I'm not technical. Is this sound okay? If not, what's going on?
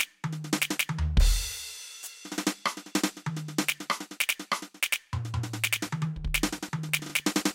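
No. From 5.58 s to the end at 7.54 s, the music carries a faint, steady ticking about ten times a second. That's Wi-Fi interference: a nearby wireless radio's regular 102.4 ms signal leaking into the audio circuit. Its clock-like regularity sets it apart from random crackle or clicks.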